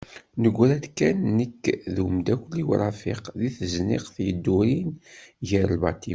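Nothing stood out on listening to the speech in this recording.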